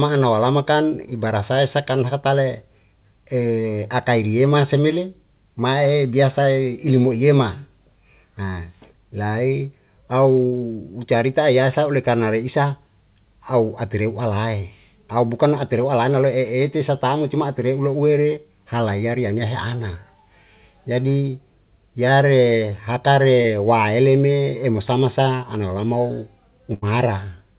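At 10.46 s a burst of packet loss removes about 60 ms of the speech, ending at 10.54 s. The receiver fills the hole by extending the last decoded sound and lowering its level through the gap, so a held buzz or a fading hiss stands in for the missing material. Playback then picks up later in the utterance, with that stretch gone.

At 23.42 s, short concealed packet loss affects roughly 20 ms, ending around 23.46 s. The decoder had nothing to play for that span and synthesised a continuation from the preceding signal, then crossfaded back into real audio. The result is a brief smear or wobble, and a short consonant falling in that window can disappear.

At 26.74 s a second burst of packet loss removes about 80 ms, ending at 26.84 s, and is handled the same way: a decaying extension of the previous sound, then a jump forward once packets resume. All of this passes through a call path with nothing above 4 kHz, which fits 64 kbps G.711 mu-law telephone coding.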